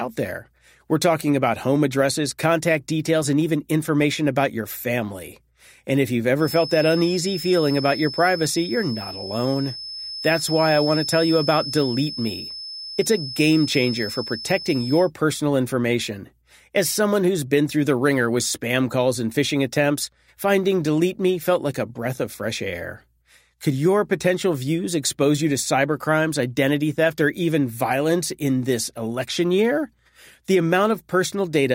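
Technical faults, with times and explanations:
6.35 to 15.12 s, feedback whistle. A thin, steady tone near 5.2 kHz sits behind the speech for almost nine seconds. It stays roughly 10 dB below the speech and swells and fades slowly in level. It never runs away. The likely cause is the loudspeaker-to-microphone loop resting just at the edge of feedback. One frequency keeps recirculating with just enough gain to persist, but not enough to grow into a howl.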